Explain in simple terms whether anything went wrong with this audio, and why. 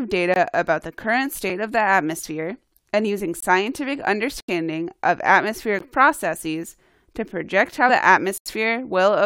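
Several things went wrong in this speech recording, and there are two different kinds of fault.

The first is a block of digital silence, which happens six times: at 0.34 to 0.36 s, 1.50 s, 3.40 to 3.42 s, 4.40 to 4.48 s, 5.79 s, and 8.38 to 8.46 s. Each time the sound is replaced by silence for between about 4 and 80 ms. This usually happens when the playback or processing software falls behind and doesn't deliver audio in time. Because the sound cuts off and comes back abruptly, the shortest gaps sound like a tick and the two 80 ms gaps sound like small holes in the speech.

The second is compressed frames skipped, at 7.88 s. The audio was stored in chunks of about 23 ms each, and roughly two of those chunks were never played, so the speech jumps forward by about 50 ms.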